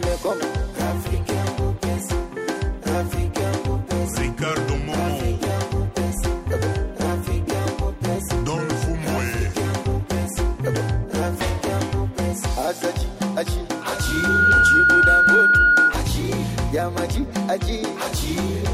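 At 13.71 s a single pure tone near 1.4 kHz emerges and swells over a little under a second into a piercing whistle that stands roughly 10 dB above the rest of the sound, then cuts off at 15.98 s. This is loudspeaker feedback squeal: the microphone was hearing its own loudspeaker, and around 1.4 kHz the loop gain went above unity, so that frequency fed on itself and grew.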